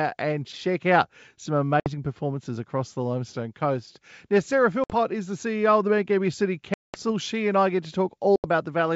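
At 1.80, 4.84, 6.74 and 8.36 s, packet loss on an ADPCM call leaves abrupt silent holes of 60, 60, 200 and 80 ms. Unlike a clean dropout, the speech comes back slightly distorted while the decoder's predictor re-aligns. Around the gaps, wideband G.722 coding at 64 kbit/s keeps the speech clear up to 7 kHz.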